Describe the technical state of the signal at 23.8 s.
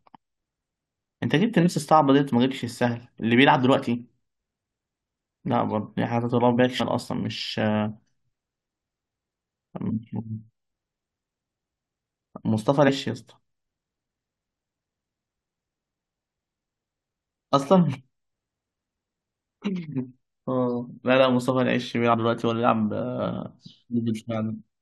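At 23.8 s the signal is intact, with no technical fault audible at that moment.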